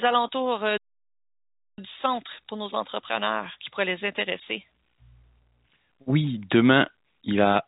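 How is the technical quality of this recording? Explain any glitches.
The clearest problem is a playback stall lasting about one second, heard through a telephone-band channel whose G.711 coding cuts everything above 4 kHz. From 0.77 to 1.78 s, just after "alentours euh", the speech halts and resumes at "du centre pour nos". The output likely starved of data or its thread was blocked, so nothing played until it recovered. On a waveform this shows as a flat line; on a spectrogram it is a blank vertical gap with abrupt edges.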